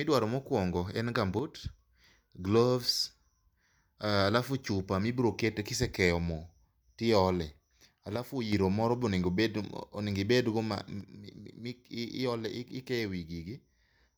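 At 1.39 s the speech suddenly sinks by about 6 dB and stays down until 1.79 s, then does it again from 8.16 to 8.53 s, right before "iro moro be", and finally from 11.01 s through to the end. Each time the level just steps down with no fade, and the first two times it steps back up. That's a one channel drops out fault, most likely one side of a stereo feed going dead, so the mono sum is left carrying only half the shared signal.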